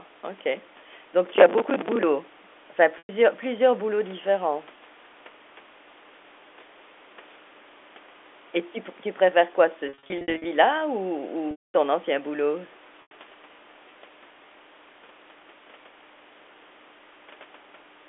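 From 1.27 to 2.03 s there's a burst of processor overload crackle: the machine kept missing its deadlines, and each missed buffer replayed a scrap of old audio with hard edges. That gritty tearing fits roughly forty misses of about 10 ms buffers.

Then come four spots of packet loss with pitch repetition, where the receiver loops the last pitch period to cover missing audio. At 2.98 to 3.09 s (110 ms) and 13.02 to 13.11 s (90 ms) the speech briefly holds as a buzzy drone. From 9.89 to 10.45 s, 360 ms of gaps are scattered across 560 ms, none longer than 60 ms, so the speech keeps briefly holding on a buzzy note. The 230 ms loss at 11.51 to 11.74 s fades to silence before the speech cross-fades back.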